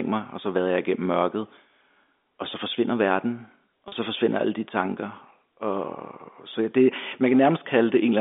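At 3.88 s a packet loss with pitch repetition drops 40 ms of audio. The receiver bridges the gap by repeating the last pitch period, which fits two lost packets, so the speech briefly sounds held and slightly buzzy before resuming at 3.92 s over the G.711 telephone band.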